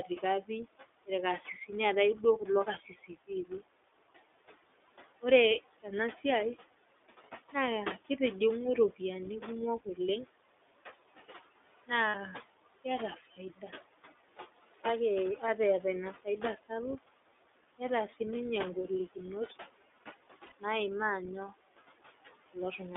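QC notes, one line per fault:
throughout, noise suppressor artifacts: The background pumps, dropping away in pauses and swelling back under the talker, and its remains have a fluttering, warbling texture with a slightly thin, watery edge on the voice. A suppressor is pulling down every band it judges to be steady noise, frame by frame, by up to about 17 dB. The room noise it is working on sits about 16 dB under the speech, enough to keep the gating busy.
throughout, iLBC codec: The speech has a telephone-band sound, with nothing below about 300 Hz or above about 3.6 kHz. It is intelligible but slightly rough, buzzy and synthetic, and the coding damage is plainly audible. This is iLBC narrowband coding. Each 20 ms frame's excitation is coded independently of the previous one, and the texture fits the 20 ms mode at roughly 15 kbps, which renders fine detail and the noise bed coarsely.
2.66–3.09 s and 13.16–13.38 s, speech cut by the noise suppressor: In each span, parts of the speech go faint or swallowed, with softer sounds and endings dipping by about 12 dB in the first and about 10 dB in the second. 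Around 150 ms is affected in each. The suppressor mistook low-level speech energy for background noise and turned it down along with the noise.
12.08–12.16 s and 20.46–20.52 s, lost iLBC frames: Each gap lasts 60 ms and is filled by a held, faintly buzzy, breathy sustain in place of the real sound, which fits three lost 20 ms frames. The decoder concealed the loss by repeating the last pitch cycle blended with noise. Because iLBC frames do not depend on their predecessors, the voice is right again almost at once after each gap.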